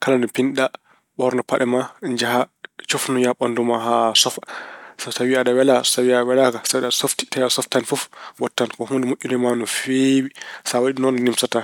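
No technical faults can be heard anywhere in this recording.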